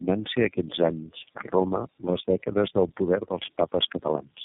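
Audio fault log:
Throughout: tandem speech coding. The speech sounds rough, muffled and warbly, with nothing above 3.8 kHz. It has passed through about three speech codecs in a row, likely ending in iLBC, each re-coding the last one's damage, so it sounds worse than any single low-bitrate coder would.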